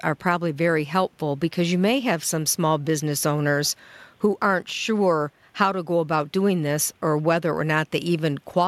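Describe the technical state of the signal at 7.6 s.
At 7.6 s the speech signal is intact, with no fault present at that moment.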